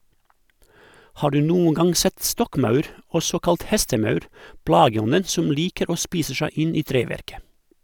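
No technical faults can be heard anywhere in the recording.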